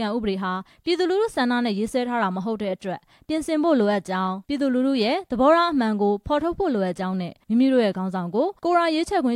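No technical faults can be heard anywhere in the audio.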